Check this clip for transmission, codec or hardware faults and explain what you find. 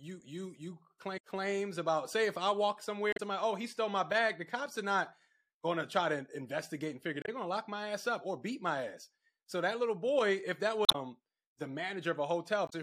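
Five short faults of damaged data in a compressed stream. Corrupted bytes threw the decoder out of sync, so it misread frames while hunting for the next valid header. Each one is a brief chirp or blip, lasting 30 to 100 ms: 1.16–1.19 s, between "you you" and "claims about say if"; 3.12–3.20 s; 7.21–7.29 s, between "to investigate and figure" and "going to lock my"; 10.85–10.95 s, after "that little boy"; and 12.66–12.73 s.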